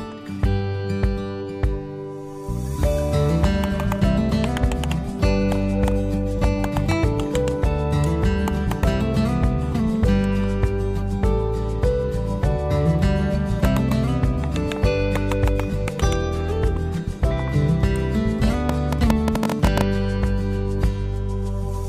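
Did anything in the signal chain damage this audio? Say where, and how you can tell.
Yes: a train of clicks, about fifteen irregular pops near 11 per second, rides roughly 15 dB above the sound from 18.69 to 19.82 s, likely interference in analogue wiring.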